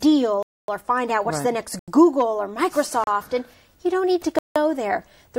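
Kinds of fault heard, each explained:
Block of digital silence: the sound drops to silence and back with no ramp, in four holes of 256, 85, 34 and 171 ms. Unlike a fade or a dropout that leaves residual noise, each gap is completely dead.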